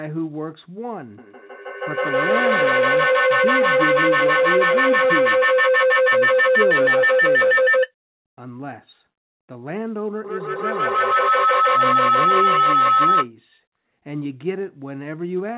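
Feedback howl from 1.18 to 7.94 s and 10.24 to 13.31 s: the loop regains level each pass, building tones near 500 Hz, then 1.5 kHz, with repeats roughly every 150 ms, about 10 dB above speech. Spectrograms show a bright horizontal line; waveforms swell thick.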